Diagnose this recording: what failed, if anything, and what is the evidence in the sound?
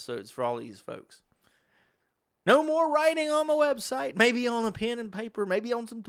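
Nothing failed; no fault is audible in this recording.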